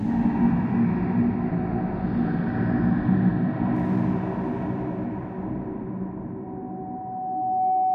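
Everyday sounds, interrupted from 6.43 s to the end by loudspeaker feedback squeal: a steady 749 Hz tone swelling over about a second to roughly 5 dB above the sound. It grows from a loop between microphone and loudspeaker, unlike a hum, which holds a fixed level from the start.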